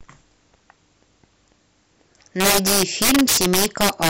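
Integer overflow affects this speech from 2.40 s to the end: samples driven about 11 dB past full scale wrapped to the opposite sign instead of being limited, so each loud peak flips across the whole range and cracks violently, far harsher than ordinary clipping.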